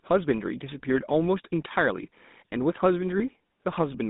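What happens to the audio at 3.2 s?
Lost GSM frames at 3.18 to 3.23 s: the decoder covers the gap by repeating the last good frame's settings, so the sound briefly freezes into a rough, metallic ring. The gap is short enough to fit a single lost 20 ms frame, so it never fades to silence.

GSM full-rate codec damage also runs through this moment. The codec rebuilds the voice from a vocal-tract model driven by sparse, regularly spaced pulses, which gives a plainly audible buzzy, gravelly roughness, and the band is held to roughly 150 Hz to 3.7 kHz.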